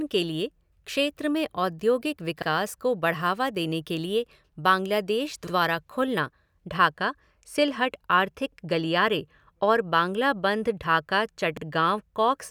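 Speech with overlapping chunks. A 50 ms piece plays twice at 2.42, 5.47, 8.52 and 11.57 s, after "लिए क्षेत्र में औद्योगिक" and before "गलियारे और". Each 3-second chunk starts before the last one ends, so every join gives a regular stutter.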